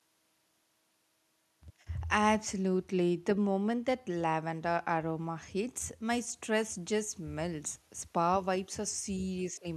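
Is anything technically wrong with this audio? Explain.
No, the speech signal shows no technical faults from beginning to end.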